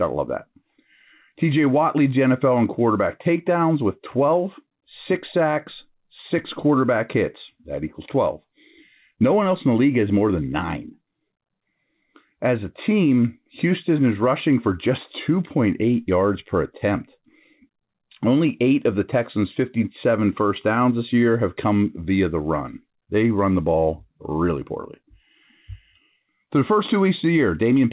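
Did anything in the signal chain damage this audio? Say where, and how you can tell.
No, nothing in this speech stood out on listening as damage from any stage of the chain, and the band limit around 4 kHz is just what the G.711 mu-law call path carries.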